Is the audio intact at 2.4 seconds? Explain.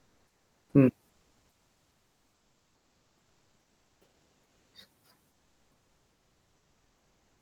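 No. From 1.09 to 4.73 s the sender has likely stopped transmitting during a pause in the speech, with Opus-style discontinuous transmission, leaving the receiver to generate comfort noise in place of the background for about 3.6 s. At 2.4 s, then, the faint real background, sitting roughly 52 dB below the loudest speech, is replaced by a smoother synthetic noise, about 3 dB quieter.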